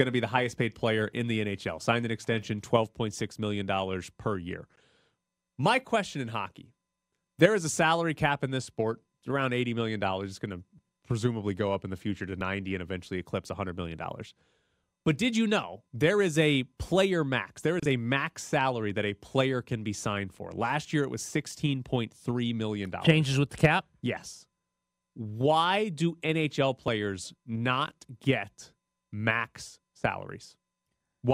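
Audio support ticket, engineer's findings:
Skip at 12.41 s in the speech, between "in the future to" and "and eventually eclipse", with a small forward jump in the sound and no gap. Likely a dropped buffer (overrun): a few milliseconds of capture overwritten before being read, and the two sides spliced directly.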